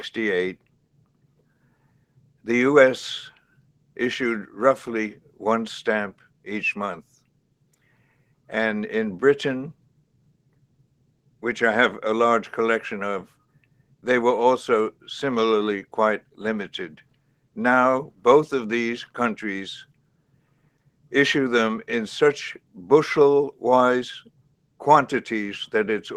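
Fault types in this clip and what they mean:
Sound cut by the noise suppressor: the suppressor mistakes steady stretches for noise and pulls them down about 12 to 13 dB, eight times between 0.56 and 24.8 s.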